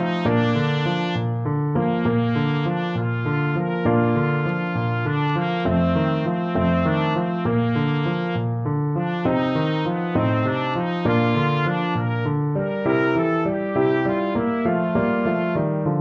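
From 1.77 s to the end, the audio turns dull and muffled, its brightness and crisp top end rolling away so everything sounds veiled. The cause is de-emphasis applied wrongly: a treble-cut curve meant to undo pre-emphasis was applied where no boost existed to cancel, or applied a second time. The response slopes smoothly downward toward the high frequencies, sitting about 13 dB lower at 10 kHz than at 1 kHz.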